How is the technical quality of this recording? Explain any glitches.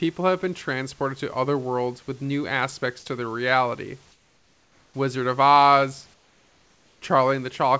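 The recording carries two short patches where the background changes character, from 4.12 to 4.94 s and again from 6.14 to 7.02 s. In each pause the natural room noise, sitting about 37 dB below the loudest speech, gives way to comfort noise in place of the background: a flat, featureless hiss about 6 dB quieter, lasting 0.82 s and then 0.88 s. The likely cause is discontinuous transmission. The sending side stops transmitting during the pauses, and the receiver synthesises a rough imitation of the background. Unlike a dropout or noise gate, which would leave true silence, the gap is filled, but the room's texture vanishes until the patch ends. The call path also limits the bandwidth, with nothing above 8 kHz.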